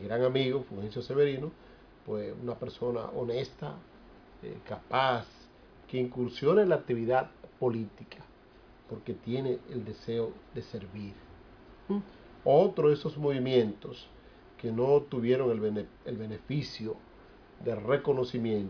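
Nothing stood out on listening to the audio.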